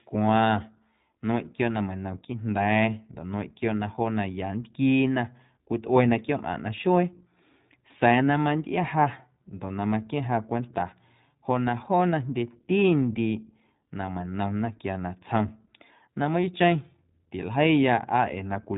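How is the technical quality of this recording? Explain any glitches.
The quality is limited by one fault that runs through the whole speech clip: iLBC codec coding, and the damage is plainly audible. Each short frame, which fits 20 ms frames at around 15.2 kbps, is coded independently and nothing above 4 kHz survives. The result sounds muffled, slightly rough and synthetic, with a spectrogram showing a hard empty band above 4 kHz.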